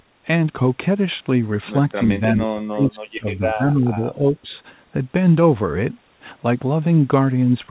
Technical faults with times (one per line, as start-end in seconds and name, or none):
2.36-4.49 speech suppressed in double talk